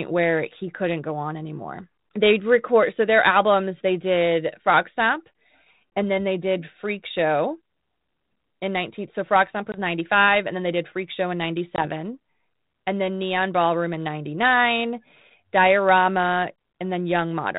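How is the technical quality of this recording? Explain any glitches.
The recording has three brief dropouts, all packet loss on an ADPCM call. The telephone-band sound, which fits 32 kbit/s G.726 ADPCM, carries the light coding roughness of that codec. The dropouts fall at 5.96 s, from 9.72 to 9.77 s, and from 11.76 to 11.86 s. Each time, about one 20 ms packet of speech never arrived and was replaced by silence, leaving a hard-edged gap. The receiving decoder's adaptive predictor and step size then no longer matched the sender's, so the speech comes back with some distortion until the decoder resynchronises over the following tens of milliseconds.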